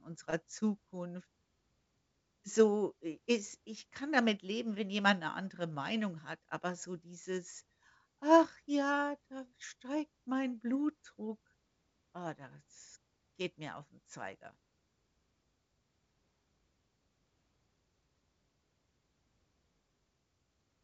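Nothing stood out as a technical problem on listening to this speech clip.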